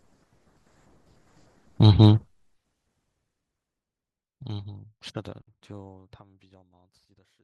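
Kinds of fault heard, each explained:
No technical faults can be heard in the speech, and the level eases gradually down from around three seconds in to the very end with no click or hard edge, as an editor's deliberate fade would.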